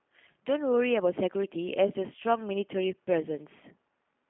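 From start to finish the speech sounds thin, boxed-in and faintly rough, with a buzzy, synthetic edge to the voiced sounds and a plainly audible processing grain. This is G.729 codec damage: the sound is carried in a narrow telephone band of roughly 150 Hz to 3.4 kHz, with nothing above 3.5 kHz, and rebuilt from a vocal tract model, pitch predictor and sparse pulses at a rate that fits 8 kbit/s G.729A.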